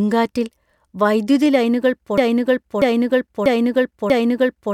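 After "വൈദ്യുതി ലൈനുകൾ", from 2.18 s, a broken-record loop repeats one 0.64 s piece identically four times to the end, likely a stalled stream, unlike fading echo.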